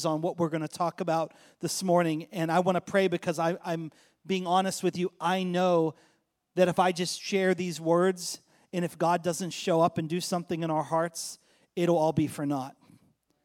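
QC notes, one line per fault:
No fault found.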